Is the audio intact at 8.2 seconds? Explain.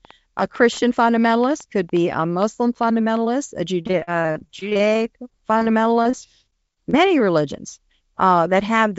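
Yes, the speech at 8.2 seconds is intact: no dropout, glitch or other fault occurs at that moment, and what is audible there is the steady band limit of the call path, with nothing above 8 kHz, consistent with a wideband codec such as G.722.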